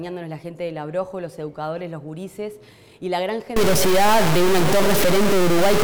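From 3.56 s to the end, the sound turns harsh and buzzy, with a coarse distortion that tracks the waveform rather than sitting on top of it as steady hiss. This is likely a stuck bit, where one data bit from a faulty line or converter is held at 0 or 1. Roughly half the sample values are then pushed off by that bit's weight, an error of about -15 dBFS, which is loud enough to give the gritty edge.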